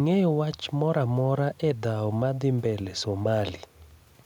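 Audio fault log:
There is no fault in this speech clip.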